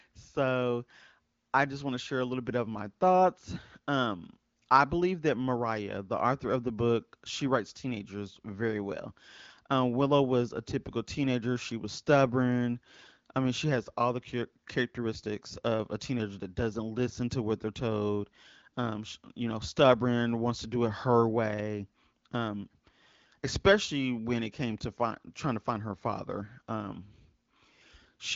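No technical faults can be heard in this speech recording.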